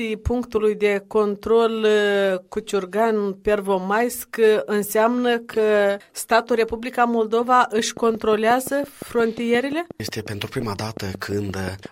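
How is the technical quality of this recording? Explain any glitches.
The recording has one clear glitch, a train of clicks near the end. From 7.79 s to 11.87 s, something, likely interference from nearby equipment or a faulty connection or power supply, injects a repeated pulse. Some twenty near-identical clicks arrive at a regular 5.7 per second, peaking about 5 dB above the sound, and are heard as steady ticking over it and through pauses.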